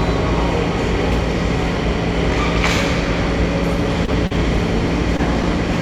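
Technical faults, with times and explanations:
4.05–4.10 s, 4.27–4.32 s and 5.17–5.20 s, short concealed packet loss: each time about 20 ms of audio failed to arrive, and the receiver patched the gap by extending the preceding sound, filling 23, 36 and 18 ms before crossfading back. The middle one also shifts timing slightly. Each is heard as a brief smear or wobble. A spectrogram shows short frozen, stretched patches. The waveform shows repeated cycles or shaped noise.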